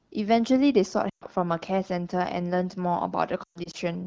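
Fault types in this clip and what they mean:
Lost AMR speech frames: at 1.09–1.24 s and 3.43–3.76 s, corrupted frames were discarded and the decoder repeated the last good pitch and vocal-tract settings at falling gain, smearing 120 ms of speech, then 160 ms scattered over 0.42 s, as dips toward near silence.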